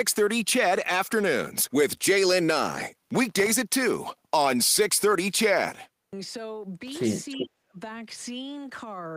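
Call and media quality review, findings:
Processor overload crackle, 3.25–3.50 s. Audio thread missed a run of buffer deadlines; each missed slot was left silent, and the spacing fits a buffer under a millisecond long. Result: a quarter-second burst of gritty crackle, hard-edged micro-gaps chopping through the speech.

Processor overload crackle, 6.88–7.16 s. Same render-path overload, longer run of missed deadlines, a few dozen silent micro-gaps. Heard as about 0.29 s of denser tearing crackle over the speech, ending once the load clears.

Echo leak, 7.29–7.47 s. Far-end acoustic echo canceller likely left residual loudspeaker pickup uncancelled and sent it back. Heard as a delayed copy of the speech, 386 ms late, about 10 dB below the direct speech, as a short scrap.

Speech suppressed in double talk, 7.36–7.78 s. Both ends active; echo suppressor likely could not separate near-end speech from echo and attenuated everything. 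Near-end speech dips by up to about 35 dB, partly cut out over roughly 0.4 s, overlapping the echo.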